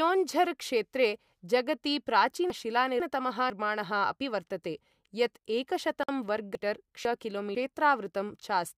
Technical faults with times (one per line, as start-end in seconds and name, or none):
2.50-3.50 chunks out of order
6.03-6.09 gap at a join of encoded pieces
6.55-7.55 chunks out of order